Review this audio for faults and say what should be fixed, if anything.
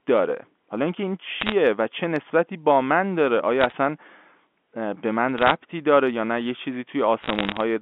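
Four short bursts of crackle over the speech, at 1.41 to 1.52 s, 3.61 to 3.72 s, 5.38 to 5.52 s, and a longer one from 7.20 to 7.60 s. That's bit errors on a digital phone line. The G.711 mu-law stream underneath is carrying the usual 200 Hz to 3.5 kHz phone band, but roughly half a percent of its bits got flipped in those stretches, about 0.7% in the first. Each flip corrupts one sample, and the ones landing on upper bits or on the sign of loud samples come out as sharp ticks. To prevent it, fix the noisy line or interface causing the errors, or add error detection and concealment on that link.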